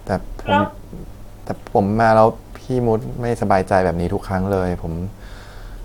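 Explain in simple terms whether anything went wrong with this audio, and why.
Nothing went wrong: the speech comes through steady and continuous, with no dropouts, clicks, distortion or other faults at any point.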